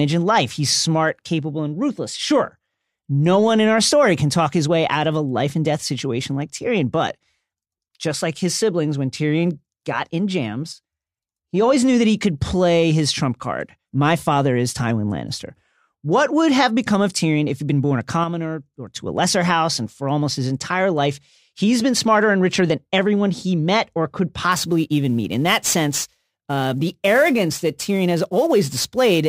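Speech, with two kinds of fault. One channel drops out, likely a stereo feed losing a side, from 10.73 to 11.17 s (after "got in", before "he always knew that") and from 18.24 to 18.96 s (after "he'd been born a"). The mono level falls abruptly by about 6 dB. Sample clock jitter begins at 24.52 s, after "he met or could", and runs to the end. A converter clock wandering by roughly ten microseconds mistimes each sample, adding a rough hiss about 20 dB below the signal that swells on loud, bright sounds and disappears in pauses.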